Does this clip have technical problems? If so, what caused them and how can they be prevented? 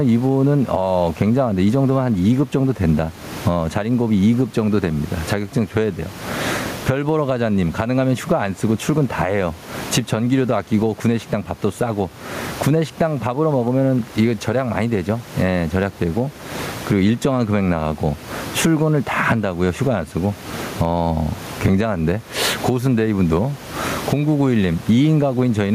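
Yes, there's gain pumping throughout the speech. The room noise sits about 29 dB under the talker, with the level swinging by something like 20 dB. The likely cause is input gain set far too hot, with a fast limiter or compressor clamping down on each loud syllable and releasing in the gaps. That squashes the dynamics. To prevent it, lower the mic gain and ease off or bypass the fast compressor or limiter.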